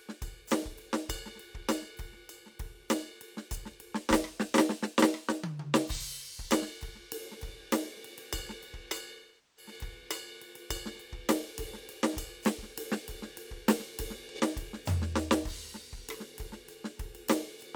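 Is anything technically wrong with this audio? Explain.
Yes. The music smears into a brief noisy, phasey patch at 5.94 to 6.05 s and again at 14.29 to 14.40 s. At 9.14 s it decays to a very faint noise floor, then fades back by 9.72 s. This is AAC frame loss with concealment. The decoder rebuilt missing frames from the last good spectrum, then faded out as the gap lengthened. The short patches fit a single lost frame of about 43 ms. The longer dropout fits roughly ten consecutive frames.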